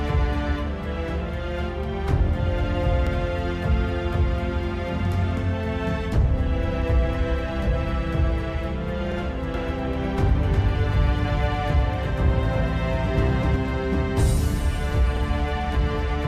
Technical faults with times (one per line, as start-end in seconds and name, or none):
3.07-3.12 overlapping chunks
9.12-9.17 overlapping chunks
9.54-13.56 doubled audio track
15.17-15.22 overlapping chunks